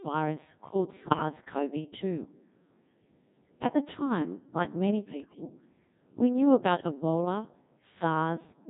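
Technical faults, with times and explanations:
Throughout: Codec 2 vocoder at 1.6 kbps. Only pitch, voicing, energy and spectral shape survive, so the resynthesised speech sounds heavily robotic and buzzy.
1.00 to 1.22 s and 5.2 to 5.5 s: bit errors on digital voice radio. Roughly 7% and 10% corrupted bits scramble frame parameters, causing pitch jumps, warbles and bleeping gibberish.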